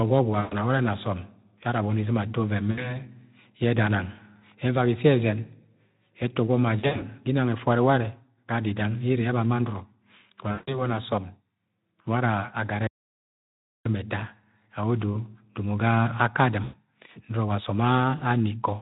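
VoIP packet loss concealed by the speech codec hits at 0.39, 2.71, 6.79, 10.51, 16.63 and 18.17 s: the decoder extrapolates across gaps of 40 to 160 ms, smearing the sound into a buzzy tone or coloured noise that fades. An audio dropout to silence runs from 12.87 to 13.85 s, about a second of dead silence with no room tone, likely a lost input.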